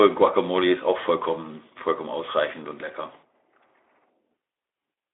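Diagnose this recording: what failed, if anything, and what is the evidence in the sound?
Nothing failed; no fault is evident anywhere in this recording.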